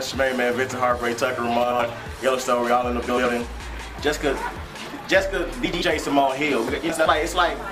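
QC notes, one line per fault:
1.63–1.82 s, 3.09–3.26 s, 5.65–5.83 s, 6.89–7.08 s: frames out of order. Each stretch has a brief garbled flutter where the sound seems to jump forward and then back. In each one, two neighbouring blocks of about 80 ms were decoded in swapped order, so the later block plays first and the earlier one follows. The joins no longer line up, but no time is lost and the sound around each stretch keeps its timing.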